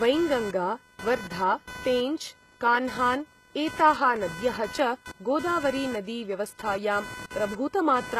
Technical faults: computer activity noise; HE-AAC compression

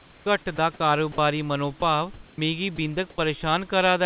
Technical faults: comfort noise in place of the background; sound dropped by the voice detector; sound chopped by the voice detector

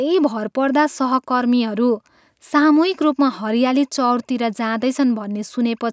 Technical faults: none

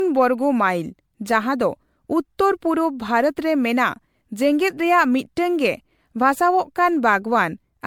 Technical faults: generation loss

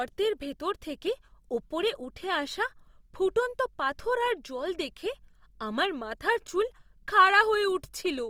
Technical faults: Opus compression

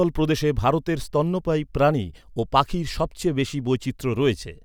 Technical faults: none

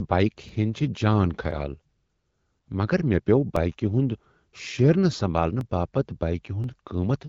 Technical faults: periodic USB or driver dropouts

